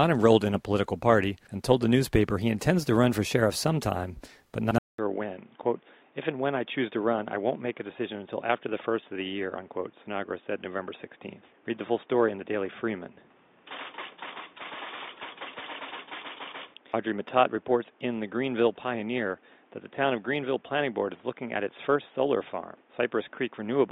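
At 4.78 s a 200 ms silence gives way to duller, slightly quieter sound with nothing above 3.7 kHz and new faint background noise, lasting to the end. The gap and changed noise, not simple filtering, point to an input likely switched to a poorer device.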